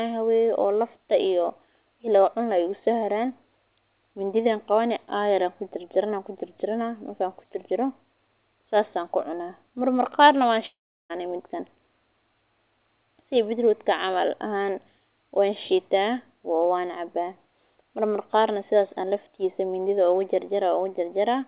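A speech recording with a long network dropout from 10.66 to 11.12 s. The last sound before the gap is stretched into a brief buzzy fill that decays, and for roughly the final 0.36 s of the gap only near-silence remains. Speech then resumes with about 0.44 s of material absent, likely because a run of packets never reached the receiver. Throughout the clip, nothing is heard above 4 kHz, consistent with a G.711 call path.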